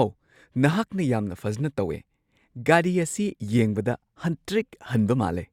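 No technical faults can be heard anywhere in the speech signal, which stays steady and continuous throughout.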